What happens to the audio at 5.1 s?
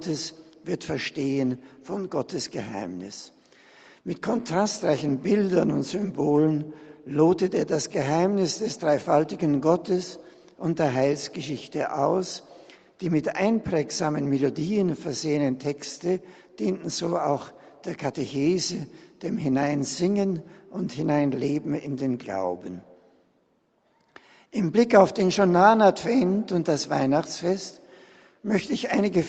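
Nothing goes wrong at 5.1 s; the audio is intact there, carried normally through the call path, with its content capped at about 8 kHz.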